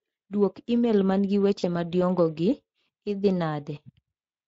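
Throughout the speech there is a plainly audible hoarse, grainy roughness. This is Speex codec damage: the CELP coder has too few bits to model the excitation cleanly, so the voice carries a noisy edge. That fits a setting of roughly 20 kbps.

From 1.59 to 1.65 s, between "imel man gi" and "madiongo gi", the speech smears into a short, stretched, fading sound. This is VoIP packet loss concealed by the speech codec. About 40 ms of audio, roughly two frames, was lost, and the decoder extrapolated from its last pitch and filter while lowering the gain.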